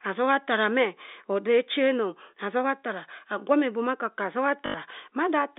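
At 4.66 s, running to 4.74 s, the speech breaks into a short robotic stutter: packet loss with last packet repeated. Roughly 80 ms of audio never arrived, and the receiver filled the gap by replaying the last good packet. The run buzzes at about 50 Hz, which fits four lost 20 ms packets. The G.711 telephone band, around 250 Hz to 3.7 kHz, carries through.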